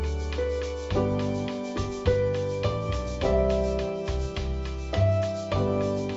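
Nothing here sounds wrong: the audio has simply been through a call's microphone processing, so the lowest bass is trimmed away and nothing reaches above 8 kHz, which is just what that kind of path does.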